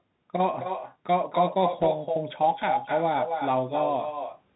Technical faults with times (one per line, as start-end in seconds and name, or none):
0.00-4.56 echo with no canceller
0.00-4.56 Bluetooth CVSD headset codec
1.82-1.85 bit errors on a Bluetooth voice link